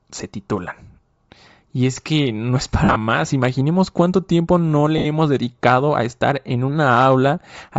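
Throughout, the speech has a breathy, grainy upper band where high-frequency detail has been replaced by shaped noise, likely Bluetooth LC3 compression at a low bitrate; the texture fits around 32 kbps with 10 ms frames, and the damage is plainly audible.

From 2.84 to 2.96 s, lost LE Audio frames cut about 100 ms of audio, scattered over 120 ms with the longest gap near 50 ms. The decoder fills these gaps by repeating the last spectrum with randomized phase, so the speech smears into noisy fragments. A second loss of about 70 ms at 4.98 to 5.06 s produces the same smeared, hissy break.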